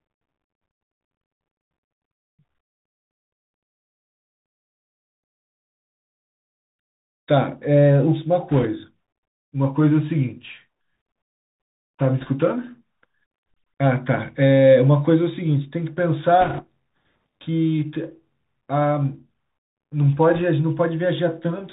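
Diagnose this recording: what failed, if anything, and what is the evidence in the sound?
The whole recording has passed through a Bluetooth CVSD headset codec, the narrowband voice path used by headsets. The speech has no content above 4 kHz, s sounds are scratchy, a fine granular hiss sits under the speech, and loud bright passages sound rough. This fits a 64 kbps CVSD stream, where each sample is a single up-or-down bit and the adaptive step size cannot keep pace with fast, high-frequency movement. The result is slope overload and granular noise.

Bit errors on a Bluetooth voice link add short bursts of rushing, crackly noise at 8.52–8.66 s, 12.19–12.29 s, 16.42–16.65 s and 20.35–20.42 s. The bursts at 8.5 s and 16.4 s are noticeably rougher than the other two, which fits an error rate of roughly 3 percent against about half that elsewhere. This is a radio-link problem, not a codec problem. 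In CVSD every bit carries the same small weight and the decoder recovers quickly, so flipped bits produce diffuse crackle, not sharp clicks.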